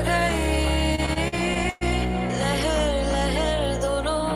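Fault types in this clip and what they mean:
dropped samples: sharp single clicks at 0.31 s and 2.54 s, likely from a fraction of a millisecond of samples missing, so the waveform jumps.
repeated stalls (stutter): the sound drags and stutters from 0.95 to 1.83 s as late packets drain the jitter buffer seven times, each gap filled, nothing lost.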